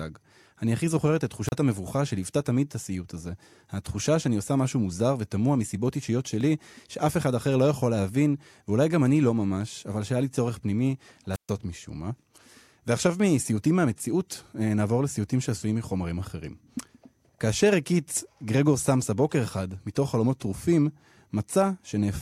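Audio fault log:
1.46–1.53 s and 11.33–11.50 s, wireless microphone squelch dropout: each starts with a short swell of hiss and static, then the voice drops into near silence before returning. The first gap is brief, about 34 ms of mute, and the second lasts about 130 ms. The FM radio link from the microphone fades, the receiver's squelch closes and mutes the output, then reopens once the signal recovers.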